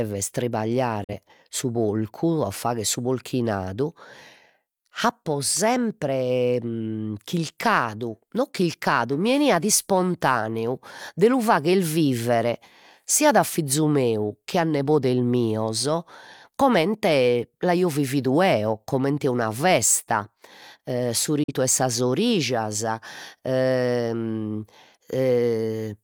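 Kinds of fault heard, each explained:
Digital broadcast dropout: at 1.04 s and 21.43 s the receiver muted on a bad frame, the speech fading within 8 ms to a gap of about 0.1 s.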